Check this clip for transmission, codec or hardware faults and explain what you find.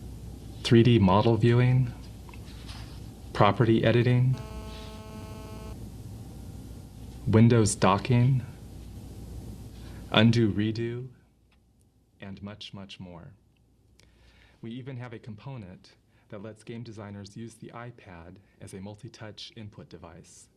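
Three faults are present: interference from a nearby 2G phone, then a stepped level change.

GSM signalling bursts, 3.54 to 4.35 s: a phone's short radio bursts are rectified by the audio circuitry, giving galloping ticks and brief 217 Hz buzzes, roughly 25 dB below the sound.

GSM phone buzz, 4.35 to 5.73 s: the phone transmits continuously in a call, pulsing 217 times a second, producing a hard, raspy, harmonic-rich 217 Hz buzz about 23 dB under the sound.

Zipper noise, 10.26 to 11.38 s: a drop of roughly 20 dB is applied in coarse, unsmoothed steps, about 400 per second, so each step clicks, producing a zipping texture across the fade.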